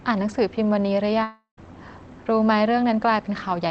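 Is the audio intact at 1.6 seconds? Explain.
No. At 1.6 s the sound has only just resumed after a gap running from about 1.23 to 1.58 s. Through that gap the last sound is stretched into a fading buzz, ending in roughly a tenth of a second of near-silence, and the audio picks up with around 340 ms of the original simply gone. This is most likely a long network dropout: packets stopped arriving, the receiver concealed the hole, and playback rejoined later without the lost stretch.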